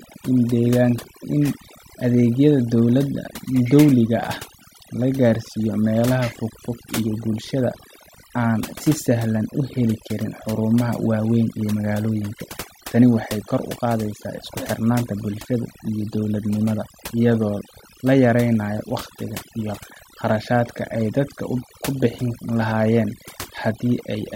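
A speech recording with overdone noise removal running from start to finish. The noise reduction was set far too aggressively, so any frequency band close to its noise estimate is pulled down hard or shut off, and the softer parts of the voice get cut along with the noise. The background drops and breaks up into twinkling specks.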